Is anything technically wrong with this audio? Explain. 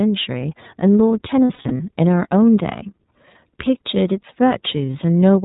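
Yes, there are two related problems.

The whole clip has gone through the iLBC codec. It's a narrowband VoIP codec that codes each frame's excitation on its own, without leaning on the previous frame. Nothing above 4 kHz survives, so the speech sounds boxed-in and band-limited, and there's a plainly audible rough, slightly synthetic edge. The character fits the 30 ms, 13.33 kbps mode rather than the 20 ms one.

There are also lost iLBC frames. From 1.45 to 1.80 s, about 210 ms of audio is missing, scattered across a stretch of roughly 360 ms, with the longest continuous hole around 70 ms. The decoder covers each loss by repeating the last pitch cycle mixed with noise, so you get short held, buzzy or breathy smears. A second, brief one at 4.86 to 4.89 s lasts 30 ms, which fits a single lost frame. Since iLBC frames stand alone, the speech recovers almost immediately after each gap.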